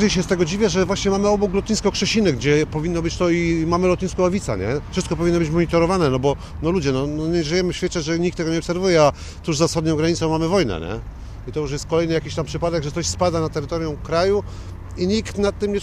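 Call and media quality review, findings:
No audible faults found; no action required.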